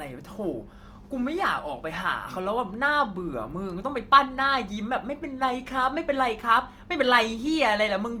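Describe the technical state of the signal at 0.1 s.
At 0.1 s, as throughout the clip, the speech carries plainly audible coding damage, heard as grainy, rough texture rather than swirling. This is likely Opus compression in music mode at a rate consistent with 24 kbps, refilling starved bands with folded or noise energy. The full bandwidth is kept, with content extending to 20.2 kHz.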